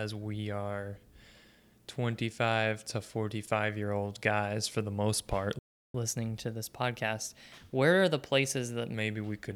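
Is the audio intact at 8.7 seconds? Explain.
No. At 8.7 seconds the speech is still inside a catch-up at higher speed, which runs from 5.94 to 8.94 s. After a stall, the player resamples its buffered backlog to run 1.1 times faster so it can regain the lost time. Because resampling changes speed and pitch together, the speech sounds both hurried and raised by about a semitone and a half. It returns to normal rate and pitch just after 8.94 s.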